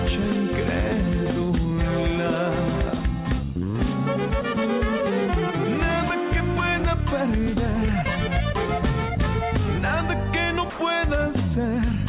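At 10.7 s the sound gives way for 90 ms to an even hiss, likely sound dropped by the voice detector, with comfort noise filling the gap. A spectrogram shows a flat, featureless wash below the call path's 4 kHz ceiling, and the waveform shrinks to low, uniform fuzz.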